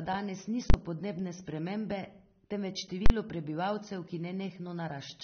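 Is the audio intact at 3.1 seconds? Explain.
No. Right after "podnebne spremembe temveč", from 3.06 to 3.1 s, the speech is replaced by a very loud pop at each edge with nothing in between, before it resumes at "prebivalcev ki". This is a burst of invalid numbers at full scale. A calculation produced infinite or invalid values, which were clamped to the largest possible sample value. The output then sat flat at one extreme value, far beyond the speech's peaks, for a 40 ms block. Only the jumps into and out of that flat level are heard, so the block comes across as two sharp clicks around a gap.

Across this moment, as across the whole clip, the speech is also dull and smeared, with a fizzy, warbling texture on sibilants and no content above 6.3 kHz. This is plainly audible AAC compression, likely AAC-LC running at a low bitrate. The dullness and the depth of the damage fit a rate of around 27 kbps. 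At that rate the encoder lowers its cut-off and quantises the remaining frequency bands coarsely against its hearing model.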